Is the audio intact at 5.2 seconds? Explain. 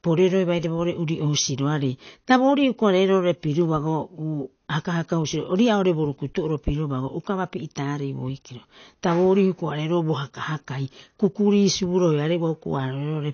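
No. At 5.2 seconds, as throughout the clip, the speech is dull and smeared, with a warbling, fizzy edge on sustained sounds and sibilants. Nothing is heard above 6.5 kHz. This is likely AAC compression at a low bitrate, around 32 kbps, where coarse quantisation leaves spectral holes and a lowered cut-off.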